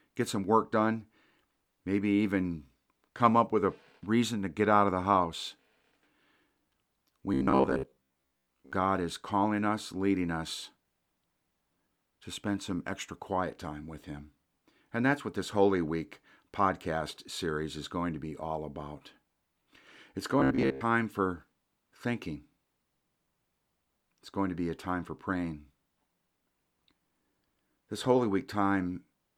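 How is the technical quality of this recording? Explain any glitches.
The recording has two glitches of the same kind: robotic sound from repeated short buffers, from 7.34 to 8.72 s and again from 20.40 to 20.81 s. In both stretches the speech collapses into a rigid, metallic buzz at 66.7 Hz that still traces the rough shape of the words. The likely cause is audio arriving too slowly, so the software loops a 15 ms fragment, repeating most of the material while the real audio is skipped. Unlike a stutter, where whole syllables repeat audibly, here the loop is too short to hear as repetition and instead becomes a fixed pitch.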